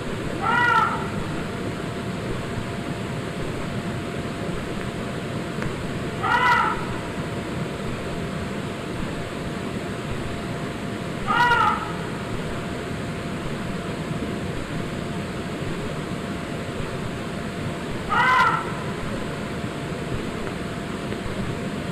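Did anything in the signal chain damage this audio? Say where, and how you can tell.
Yes. Hard clipping shows up as a harsh crackle on loud peaks at 0.47–0.83 s, a single click at 5.62 s, and again at 6.31–6.67 s, 11.31–11.69 s and 18.14–18.54 s. Peaks overran the converter or sample format by about 5 to 9 dB, so they were sliced flat, adding high harmonics.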